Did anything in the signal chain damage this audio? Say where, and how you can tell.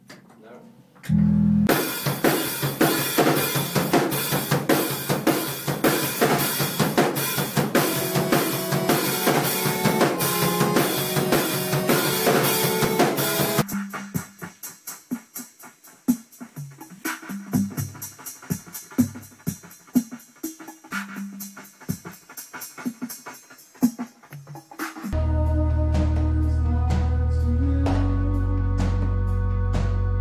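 No, nothing stood out on listening that would point to damage at any stage of the chain.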